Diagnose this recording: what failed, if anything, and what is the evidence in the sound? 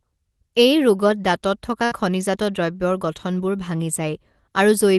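At 1.85 s the sound freezes into a brief held, fading sound until 1.93 s, then resumes with roughly 60 ms skipped. This is a burst of packet loss on the network: the jitter buffer ran dry, and the call codec, apparently Opus band-limited near 12 kHz, concealed about 58 ms before dropping the rest.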